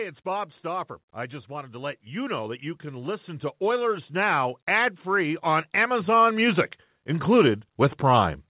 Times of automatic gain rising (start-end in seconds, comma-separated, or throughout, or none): 1.47-8.41